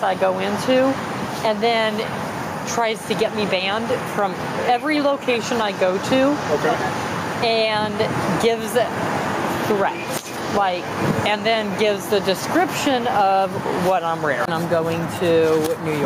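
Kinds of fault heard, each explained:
Gain pumping: Across the whole clip the level swings by around 10 dB. Loud and quiet passages sit unnaturally close together, giving a flattened, squashed texture. The likely cause is input gain set far too high for the microphone, so a fast limiter or compressor keeps clamping down on each peak and then releasing.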